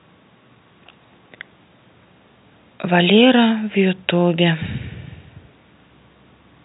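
Nothing stood out on listening to this speech clip.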